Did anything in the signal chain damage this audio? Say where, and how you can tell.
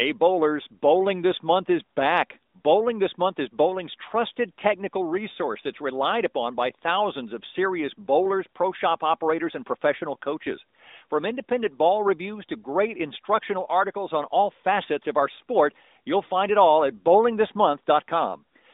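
No, nothing in the signal chain damaged this audio.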